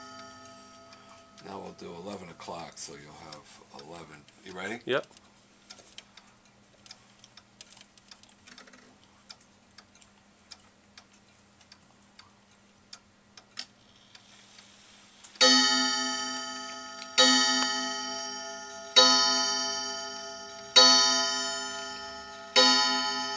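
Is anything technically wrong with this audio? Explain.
No, nothing technically wrong stood out on listening to this audio.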